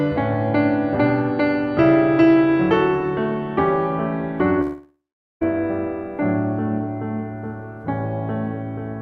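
At about 4.61 s the music suddenly stops arriving, which sounds like a long network dropout, likely from packets being lost in transit. The last bit of sound gets smeared out as a fading buzzy tail, then there's roughly 430 ms of near-silence before the music picks up again at about 5.43 s. Around 800 ms of the music is simply gone, so it resumes further along rather than where it left off.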